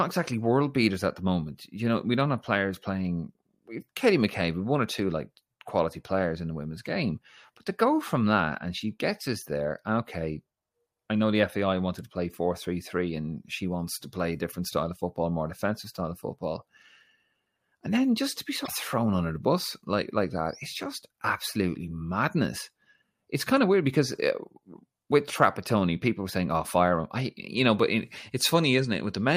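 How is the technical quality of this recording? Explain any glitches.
The recording has one audible glitch, a brief burst of damaged data in a compressed stream, between "then just to be" and "thrown under the bus", from 18.64 to 18.69 s. Corrupted bytes there left the decoder misreading about 50 ms of frames, so it lost sync and had to hunt for the next valid frame header. The result is a short glitch in the speech. On a spectrogram it shows as a narrow vertical smear of broadband or tonal junk breaking the speech harmonics. The waveform shows an abrupt discontinuity.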